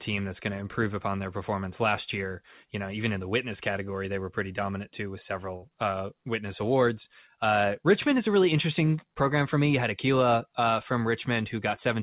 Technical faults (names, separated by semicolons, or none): burst of packet loss